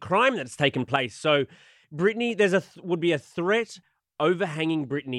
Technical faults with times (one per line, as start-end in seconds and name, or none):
0.52-0.96 sudden gain jump
1.84 audio missing between chunks
3.82 audio missing between chunks